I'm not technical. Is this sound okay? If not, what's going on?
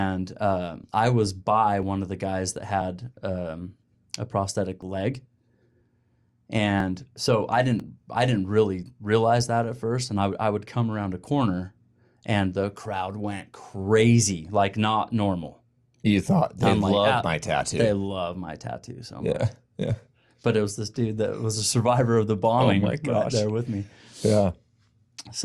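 No, there are two tiny skips in the speech, at 4.82 s right after "um a prosthetic" and at 7.80 s right after "so i". They come from overlap between stream segments. The audio arrives in one-second chunks whose timings overlapped, so the player trimmed away about 11 and 14 milliseconds of real sound, and the waveform jumps.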